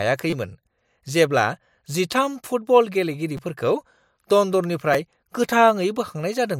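A short buzzy stutter at 0.30 to 0.33 s, and brief clicks at 3.37 s and 4.93 s, come from a repeated buffer. In each case one tiny slice of the speech, about 5.8 ms long, which fits a 256-sample buffer, plays several times in a row with a hard join at every repeat. New audio did not reach the device in time, so it replayed the last buffer, losing roughly 20 ms at the first spot and about 10 ms at the others.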